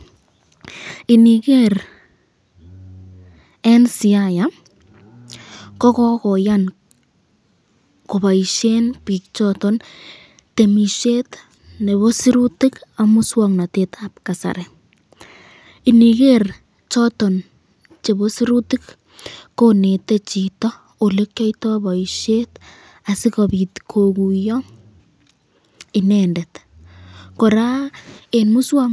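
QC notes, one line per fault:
No faults found in the speech clip on listening.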